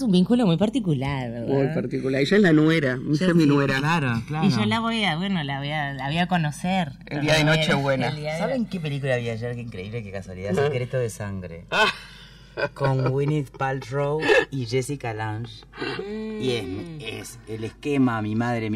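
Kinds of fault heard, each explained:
Channels drifting apart: the two channels ran on separate device clocks about 150 ppm apart, so the delay between them grew to roughly 3 ms. Summed to mono, the shifting offset sweeps comb notches slowly through the spectrum, heard throughout as slow flanging.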